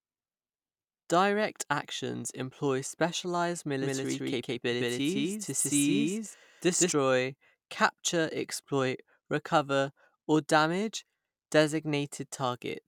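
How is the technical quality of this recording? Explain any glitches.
One glitch stands out. From 3.80 to 6.92 s, just after "actions employ specialized", a doubled audio track appears: a second copy sits roughly 150 ms behind, about equally loud, likely from a slower capture path. It sounds like a hard, dry slapback that cuts in and out abruptly. On a spectrogram or waveform, every onset shows a duplicated full-band twin.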